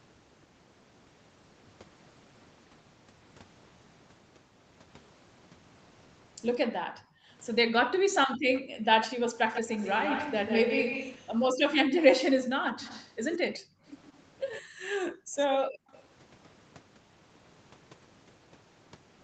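Speech over a call, with two faults. The background is gated by the echo canceller at 6.65–8.9 s, 13.59–13.84 s and 14.62–15.91 s: the room sound falls away by about 40 dB and then returns, which sets it apart from a dropout, where the speech itself would vanish. An echo leak gives a distinct delayed copy of the speech at 8.55–11.29 s (145 ms, about 5 dB below), 12.65–13.59 s (120 ms, about 15 dB below) and 15.54–16.03 s (120 ms, about 10 dB below), not smeared reverberation, likely from a loudspeaker's echo only partly cancelled.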